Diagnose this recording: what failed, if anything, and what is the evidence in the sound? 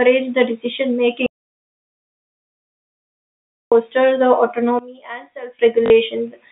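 Audio dropout to silence, at the input or link stage. From 1.26 to 3.72 s the speech cuts out into silence, about 2.45 s long, with no room tone underneath. The likely cause is a lost input while the recorder kept writing zeros.

One channel inverted, in one leg of the stereo path. From 4.79 to 5.59 s the speech falls by about 18 dB and turns faint. The likely cause is reversed polarity on one channel, so summing to mono cancels everything the two sides share.

Packet loss with last packet repeated, at the network stage. From 5.86 to 5.90 s, a 40 ms stretch stutters robotically, heard through the narrow telephone band. The receiver replayed stale audio, which fits two lost 20 ms packets buzzing at 50 Hz.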